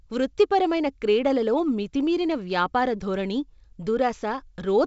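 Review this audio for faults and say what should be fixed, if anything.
There are no faults in this speech audio, so nothing needs to be fixed.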